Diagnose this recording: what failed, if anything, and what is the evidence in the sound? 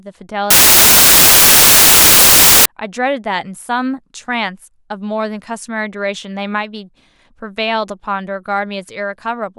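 Samples built from the wrong bytes, a sample-format conversion failure, run from 0.50 to 2.66 s: the speech becomes loud white noise. Misassembled bytes promote noisy low bits to the top, so the spectrogram turns flat and broadband, and the waveform becomes a dense band.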